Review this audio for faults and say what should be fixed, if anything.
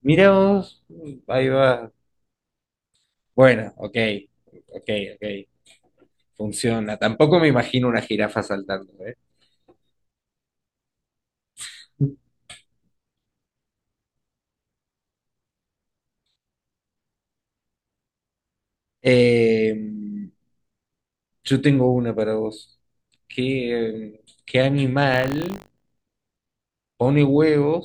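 Buffer tearing from 25.12 to 26.32 s: a rattling 50 Hz buzz rides on the speech, which fits a 20 ms buffer period. Writer and hardware reader have slipped, so a small slice of each period replays audio around 70 ms old, with hard joins either side. Prevent it by keeping the write pointer a safe margin ahead of the read pointer and resynchronising both after any underrun.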